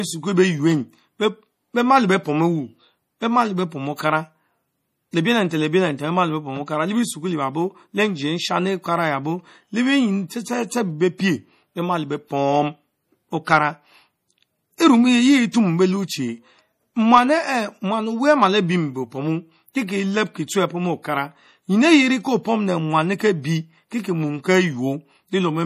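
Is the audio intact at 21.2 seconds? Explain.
No. At 21.2 seconds the speech carries MP3 compression damage, which runs through the whole clip rather than appearing only there. It is plainly audible. Nothing sounds above 15.1 kHz because the encoder cut the treble at that point. Weak frequency lines also drop in and out from frame to frame, giving a watery, swirly texture, with chirpy s sounds and softened attacks. This likely comes from a starved MP3 encode, which fits a bitrate of around 40 kbps.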